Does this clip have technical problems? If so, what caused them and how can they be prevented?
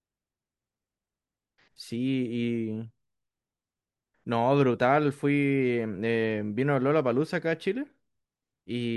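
No, the speech signal holds steady throughout, with no audible faults at any point.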